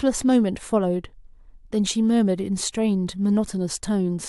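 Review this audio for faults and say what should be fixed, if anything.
No faults are audible, so nothing needs fixing.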